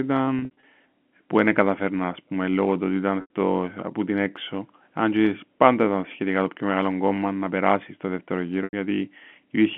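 A held, buzzy stretch breaks up the speech between 0.39 and 0.63 s, and brief buzzy holds recur at 3.21 to 3.27 s and 8.64 to 8.73 s. This is packet loss with pitch repetition: the receiver loops the last pitch period over missing audio.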